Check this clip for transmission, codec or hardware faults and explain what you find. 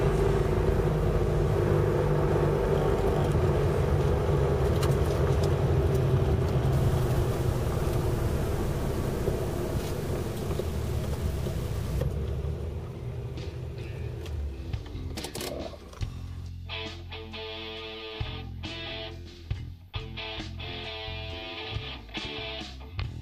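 One fault stands out: low bit depth without dither from 6.73 to 12.02 s. The signal was likely truncated to very few levels, consistent with about 6 bits, without dither, so the error tracks the audio. Quiet passages turn grainy and rough, with distortion about 20 dB below the signal.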